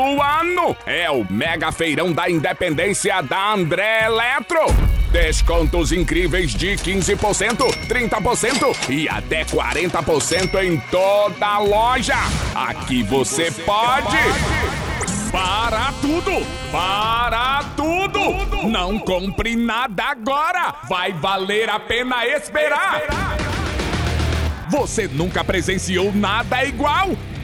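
From start to finish there's a steady buzz riding on the sound, and it's the classic signature of a resampler restarted on every block. The conversion, which sounds like 24 kHz up to 48 kHz, was done on each 10 ms chunk in isolation, so every edge got filtered against silence or wrapped-around samples instead of its real neighbours. That leaves a tiny error at each seam, 100 times a second, which fuses into a 100 Hz buzz that rises and falls with the signal and disappears when things go quiet.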